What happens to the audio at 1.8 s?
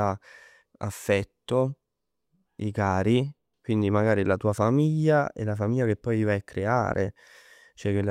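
Nothing goes wrong at 1.8 s; the speech carries on intact through that moment with no dropout, click, distortion or other fault.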